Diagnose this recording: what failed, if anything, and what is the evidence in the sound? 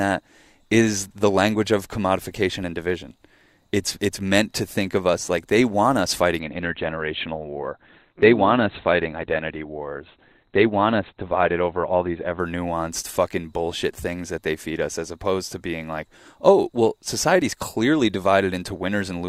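From 6.40 s to 12.40 s the speech suddenly loses its treble. Nothing survives above about 4.4 kHz, and the sound turns thin, with more codec artefacts. The top returns just as abruptly, and neither switch leaves a gap. This is an adaptive stream at a lower bitrate, a network-stage fault: the connection slowed, so the player swapped in a cheaper encoding for six seconds. The bandwidth fits a drop from around 64 kbit/s Opus to around 12 kbit/s.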